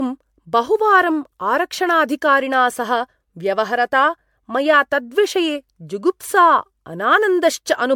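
Across the whole speech clip there is generation loss: the sound is swirly, smeared and hollow, with blurred consonant attacks, beyond what a single pass at a bitrate near 96 kbit/s would give. It is likely the result of MP3 decoding and re-encoding about five times, each pass requantising on a shifted frame grid. On a spectrogram, patchy holes and flickering bands accumulate below 20 kHz; the waveform shows softened, pre-smeared onsets.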